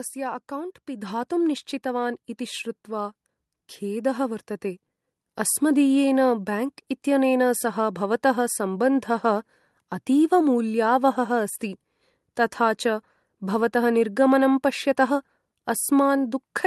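This is a speech recording with a microphone volume stepped up fault at 1.02 s. The input level jumps by about 6 dB in a single step, and the voice and the background noise rise together, so the whole sound, noise floor included, is suddenly louder from that point on. This sets it apart from a speaker leaning closer, which would lift the voice more than the room. It also differs from a compressor or automatic gain control, which would ride the level gradually rather than stepping it once. The audio also passes through a call path, and its content stops at around 12 kHz, which fits an Opus call codec.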